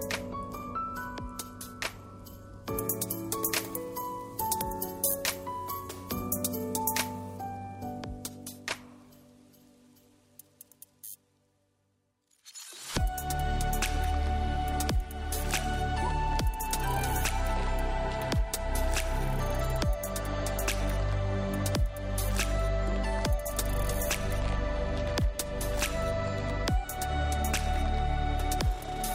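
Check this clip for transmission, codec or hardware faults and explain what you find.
One fault is present: pre-emphasis left on, from 2.77 to 7.37 s. In that stretch the treble rises steeply, about 10 dB higher at 10 kHz than at 1 kHz, which fits the 50 µs curve used in FM broadcasting. The high-frequency boost applied before transmission was never undone by the matching de-emphasis filter at the receiving end. The sound turns thin, bright and hissy with exaggerated sibilance, then returns to normal balance after 7.37 s.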